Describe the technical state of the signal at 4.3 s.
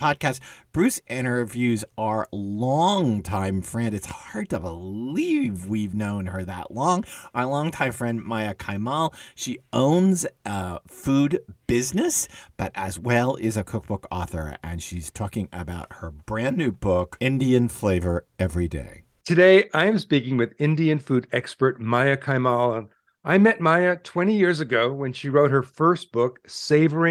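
At 4.3 s the signal is intact, with no audible fault at that point in the speech.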